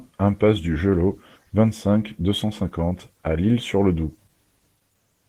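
Opus voice compression runs through the whole speech clip. The damage is plainly audible: the voice sounds hoarse, muffled and slightly robotic. The coarse coding points to a low bitrate near 16 kbps, in hybrid mode with 20 ms frames, where linear prediction carries the lower band and a transform layer carries the top.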